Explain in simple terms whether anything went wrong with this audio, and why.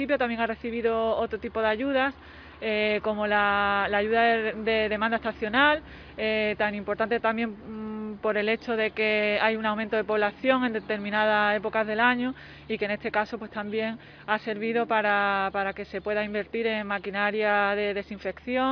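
Nothing went wrong with this audio.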